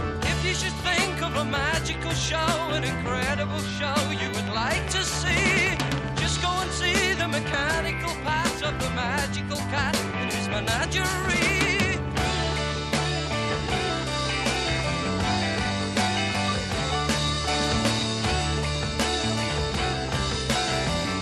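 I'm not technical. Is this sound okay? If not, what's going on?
No. From about 4.27 to 6.40 s there is a train of clicks: a steady ticking of roughly twenty sharp, near-identical pops, about ten each second, sitting on top of the sound and continuing through any quiet moments. Unlike random crackle, which is irregular and uneven, these clicks keep an even, clock-like rhythm and sound alike. The likely cause is electrical interference from nearby equipment or a faulty connection or power supply adding a pulse again and again.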